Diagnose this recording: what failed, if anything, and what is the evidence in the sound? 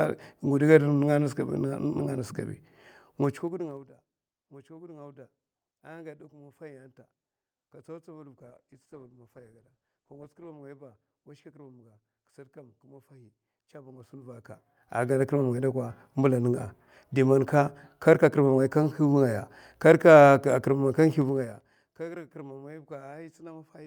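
Zipper noise in the gain stage, where level is applied per buffer without smoothing. At 3.16–3.90 s the level falls by roughly 25 dB, at 13.84–15.23 s it rises a similar amount, and at 21.18–22.01 s it drops around 20 dB. Each move is made of 2 dB steps, about fifteen per second (about ten on the rise). That produces audible ticking, a staircase envelope on the waveform and thin vertical click lines on a spectrogram.

A call bitrate drop at the codec and network stage runs from 8.38 to 10.57 s. The encoder falls from 64 to 15 kbps and stays at its lowest for 2.12 s, so the speech turns coarse, watery and muffled. On a spectrogram the upper band vanishes, leaving smeared, blocky low-frequency energy.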